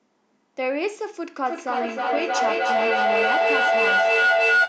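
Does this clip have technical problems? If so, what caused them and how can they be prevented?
Yes. A feedback howl starts at 1.46 s and runs to the end of the clip. Sound from one device's loudspeaker is being picked up by a microphone in the same room and sent back round, gaining level on each pass, so the repeats grow and narrow to a tone around 1.5 kHz. It pulses at about a third of a second, the loop's delay, and peaks about 8 dB above the speech. To prevent it, keep only one device's microphone and loudspeaker active per room, or use headphones.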